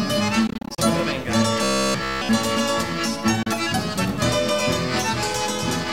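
From 0.47 to 0.82 s there is a Bluetooth dropout: about 152 ms of audio goes missing in short gaps scattered over roughly 300 ms, the longest about 30 ms. The gaps are likely from packets arriving too late at the headphones, and the sound resumes further along each time. A second dropout, losing about 30 ms, occurs at 3.43 to 3.47 s.

Between 1.63 and 2.29 s the audio turns robotic from repeated short buffers. Essentially all of that stretch is a replayed 15 ms segment, which sets a fixed buzz at 66.7 Hz. This is likely because fresh audio arrived too seldom. The result sounds rigid and metallic.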